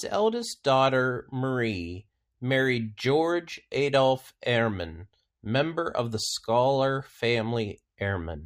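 No technical faults are audible anywhere in the speech.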